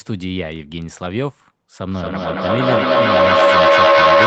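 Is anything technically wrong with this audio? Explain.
Yes. From 1.89 s to the end, feedback echo between two devices: speech returns roughly every fifth of a second, building to about 11 dB above the original instead of decaying.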